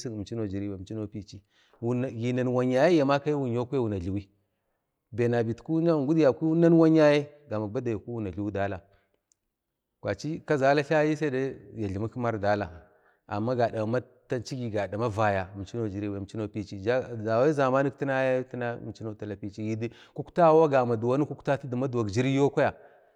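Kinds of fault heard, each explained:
No technical fault can be heard in this speech recording. There is nothing to list under any kind of fault.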